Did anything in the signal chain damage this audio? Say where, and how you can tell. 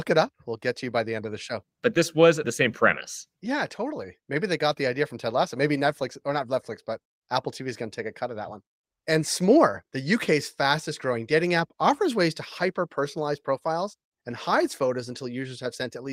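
No, nothing in this speech recording stood out as damage from any stage of the signal chain when I listened to it.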